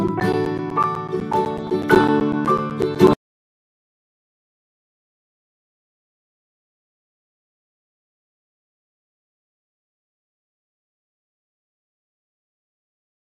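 Right from the start the whole clip sounds dull and gurgly, which is most likely MP2 compression starved of bits; the degree of damage fits something around an 80 kbps stream. Layer II chops the sound into 32 sub-bands and shares out bits among them, so at this rate the top bands get switched off and flicker in and out, while what's left is quantised coarsely, giving that granular, swirly texture you'd know from cheap digital radio.

Then at 1.50 to 2.05 s there's a stretch of DAB burbling, a burst of noisy blips on top of the sound. That's bit errors getting past the error correction into the MP2 frames, at a rate well under one percent, so short blips of noise land in individual sub-bands across a good run of frames. It comes back briefly at 3.11 s, hitting 19 frames.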